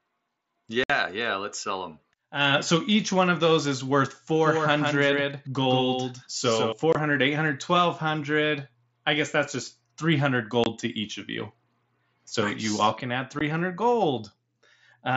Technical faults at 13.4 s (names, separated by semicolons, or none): unconcealed Bluetooth headset packet loss